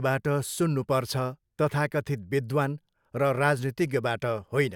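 Nothing in the recording calls for comment, with no technical faults to point to anywhere along the way.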